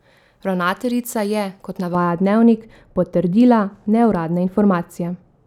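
A speech clip. From 1.95 s, just after "je kot", to the end at 5.46 s, de-emphasis is applied wrongly. A treble cut meant to undo pre-emphasis lands on audio that lacks it, or is applied twice. Highs slope away, about 11 dB down at 10 kHz. The speech turns dull and muffled.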